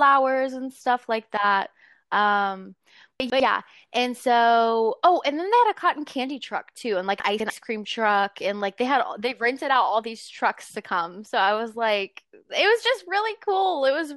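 In this speech recording, blocks of audio that fit a 100 ms chunk size were delivered out of sequence, so chunks out of order occurs twice. Around 3.2 to 3.4 s one chunk plays a single slot late, and around 7.2 to 7.5 s a chunk lands two slots late. No audio is missing, but each reshuffle produces hard joins, and the speech briefly sounds jumbled, with sounds in the wrong order.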